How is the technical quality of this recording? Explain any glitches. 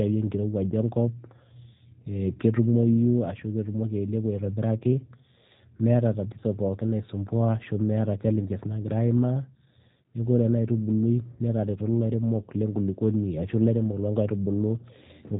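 The recording is clearly degraded by low-bitrate voice coding. G.729 codec, throughout: the speech is rebuilt from a vocal-tract filter and sparse pulses, with nothing above 3.8 kHz, giving a muffled, slightly rough, synthetic sound that fits an 8 kbit/s link.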